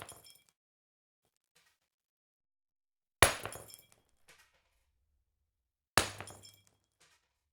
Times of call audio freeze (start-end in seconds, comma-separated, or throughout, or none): 0.51-1.25